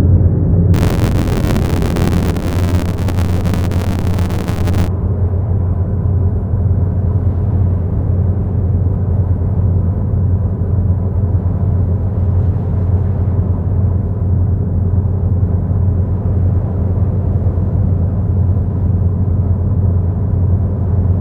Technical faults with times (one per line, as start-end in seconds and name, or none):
0.73-4.88 buffer tearing